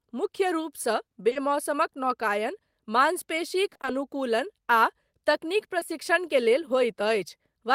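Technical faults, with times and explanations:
1.29 to 1.37 s, short concealed packet loss: two back-to-back dropouts right after "मुख्य रूपसँ", each leaving about 20 ms of sound missing. The receiver bridged each hole by extending the preceding sound and blending back in, so the passage briefly smears and wobbles.
3.69 to 3.89 s, repeated packet loss (robotic sound): across this 0.2 s stretch, several short gaps, none longer than 20 ms, arrive in quick succession. Concealment patches each one from the sound just before it, so half the stretch is synthetic fill, giving a choppy quality with fragments missing.
5.79 to 5.83 s, short concealed packet loss: between "आ तकनीक" and "के लेल", about 20 ms never arrived in time. The decoder filled the gap by continuing the previous sound and crossfading into the real audio, producing a brief smear or wobble.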